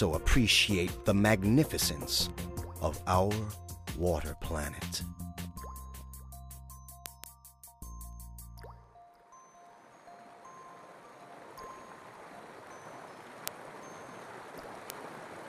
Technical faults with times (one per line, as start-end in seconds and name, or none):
0.11-15.44 word clock ticks